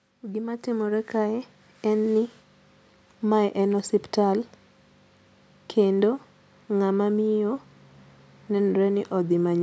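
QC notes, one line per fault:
0.2–2.13 s, automatic gain rising: the call's gain control decided the input was too quiet and pushed its level up by about 7 dB over roughly two seconds, so the speech and the background noise swell together rather than jumping, over a band that tops out at 8 kHz from the normal call microphone processing.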